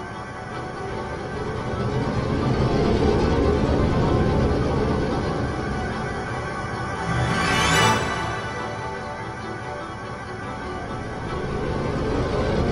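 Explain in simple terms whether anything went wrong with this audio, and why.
At 7.34 s the sound jumps ahead slightly, likely a dropped buffer (overrun). About a hundredth of a second of audio is lost and the two sides are joined directly. Unlike a dropout, there is no gap of silence.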